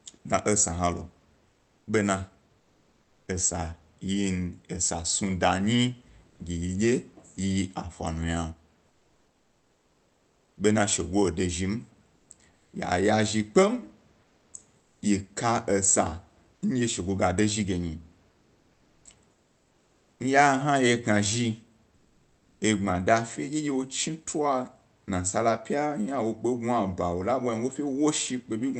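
Speech in which the pauses at 1.47–3.27, 6.29–6.39, 8.87–10.57, 12.15–12.73, 14.21–15.01, 18.31–20.19 and 21.95–22.61 s lose their natural room noise to comfort noise in place of the background, in places about 2 to 3 dB quieter, likely from discontinuous transmission in an Opus-style call codec. On a spectrogram those gaps show as a smooth, uniform wash below the 8 kHz ceiling. The waveform shows a flat, even noise floor instead of irregular background texture.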